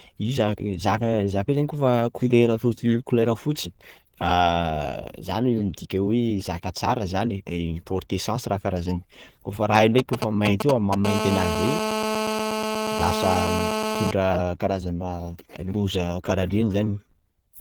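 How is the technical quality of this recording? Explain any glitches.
The recording is marred by two stretches of mobile-phone interference in the second half. Light Opus voice compression is also present throughout.

From 9.75 to 10.95 s come GSM signalling bursts. A nearby 2G handset was exchanging short control messages with the network rather than carrying a call, so it transmitted only in brief groups of radio pulses. The audio wiring rectified those pulses into sound, giving a galloping dit-dit-dit of ticks and short buzzes at about 217 Hz, roughly as loud as the speech. On a waveform these appear as separate clumps of sharp spikes. A spectrogram shows short, broadband vertical smears with a 217 Hz harmonic comb inside each clump.

From 11.05 to 14.11 s a continuous GSM phone buzz follows, as the handset settled into a call and began transmitting 217 times per second without gaps. 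Each radio burst was again demodulated by the audio circuit into a pulse, so the result is a hard, rasping buzz at 217 Hz. It sits about 2 dB below the speech and has no connection to it. A spectrogram shows evenly spaced horizontal harmonic lines at multiples of 217 Hz reaching high up the band. The waveform shows a dense, regular pulse train riding under the signal.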